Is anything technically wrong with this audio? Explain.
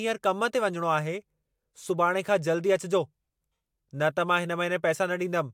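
No technical faults are audible.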